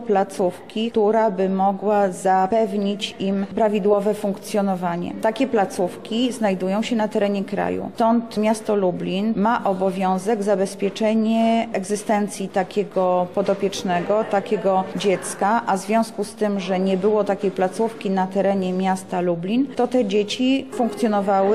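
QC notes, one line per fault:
Nothing stood out on listening to this clip.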